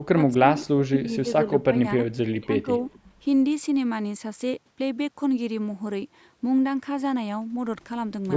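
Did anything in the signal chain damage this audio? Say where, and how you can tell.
Yes. Speech suppressed in double talk appears at 0.00–0.19, 0.37–0.45, 0.64–2.01 and 2.28–2.67 s, where the voice dips by roughly 15 to 40 dB or drops out in pieces. This is likely the call's echo canceller treating simultaneous talk as echo and pulling the microphone down.

Echo leak occurs at 2.87–2.99 s. A faint delayed copy of the voice trails by 266 ms at about 35 dB below the speech. The far end's echo canceller likely failed to remove all of its loudspeaker pickup, sending a residue back.

Background gated by the echo canceller happens at 2.99–3.13 s, right after that echo. The room sound drops by about 18 dB for roughly 150 ms, then recovers. The call-processing stage clamped the microphone while the loudspeaker was active and released it afterwards.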